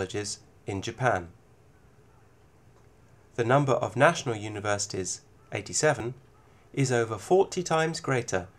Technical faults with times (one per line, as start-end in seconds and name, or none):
0.34 dropped buffer (overrun)
6.00 dropped buffer (overrun)